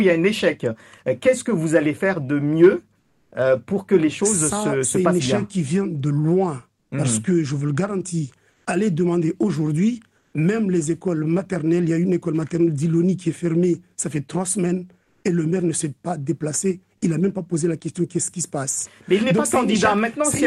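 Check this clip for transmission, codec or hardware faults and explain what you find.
Comfort noise in place of the background shows up five times, in short pauses: 2.99–3.31 s, 6.79–6.91 s, 8.51–8.65 s, 10.17–10.33 s and 15.03–15.23 s. The quiet background, about 45 to 55 dB below the loud parts, turns briefly into a flat, featureless hiss. That hiss is about 4 dB quieter at 2.99 s, about 3 dB louder at 6.79 s, unchanged at 8.51 s, and slightly quieter at the last two. The likely cause is Opus discontinuous transmission. The sender goes silent when it detects no activity, and the receiver fills the gap with synthetic noise.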